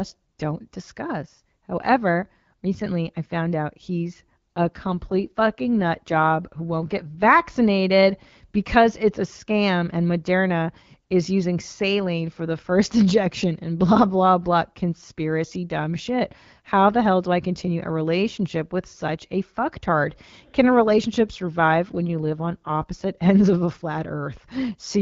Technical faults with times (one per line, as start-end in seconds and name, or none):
4.56-7.30 AMR rate drop
21.29-22.84 AMR rate drop